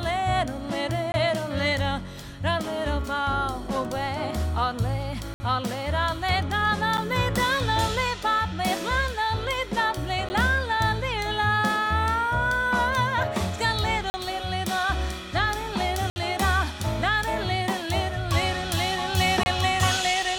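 Seven abrupt dropouts break up the sound, each a block of digital silence: 1.12–1.14 s (20 ms), 5.34–5.40 s (60 ms), 6.97 s (8 ms), 10.29 s (13 ms), 14.10–14.14 s (40 ms), 16.10–16.16 s (60 ms) and 19.43–19.46 s (26 ms). The shortest are ticks and the 60 ms ones are brief holes, where the sound cuts out and back with no fade. Runs of samples were zeroed, as happens when output isn't delivered in time.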